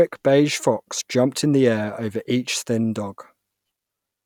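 No technical faults can be heard anywhere in the speech. There is nothing to mark at any point in the recording.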